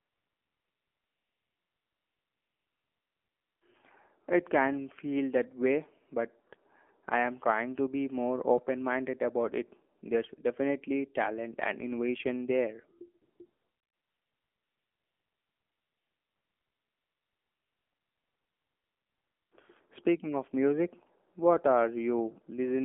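The whole clip runs through an AMR narrowband mobile codec. Speech is squeezed into roughly 250 Hz to 3.4 kHz and sounds buzzy and synthetic, which fits a low bitrate around 7.4 kbps. AMR comfort noise fills 0 to 3.62 s, a brief gap from 9.98 to 10.02 s after "about it", 13.22 to 13.40 s after "talent and innovation there", and 13.46 to 19.52 s. In each of these spans the phone stopped sending speech, so the real background gets swapped for smooth, steady synthetic hiss that switches in and out.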